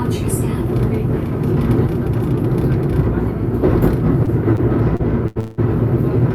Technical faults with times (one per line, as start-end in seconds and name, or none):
4.25-4.29 short stall from a late packet
4.56-4.60 short stall from a late packet
4.96-5.01 short stall from a late packet
5.27-5.38 short stall from a late packet
5.40-5.60 call audio freeze